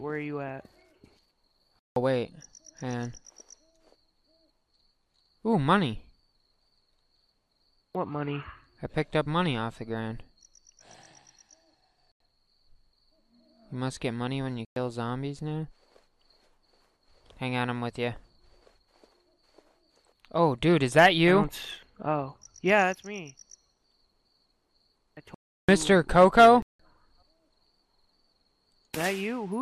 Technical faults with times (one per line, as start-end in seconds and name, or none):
1.79-1.96 block of digital silence
12.12-12.20 block of digital silence
14.65-14.76 block of digital silence
25.34-25.69 block of digital silence
26.62-26.79 block of digital silence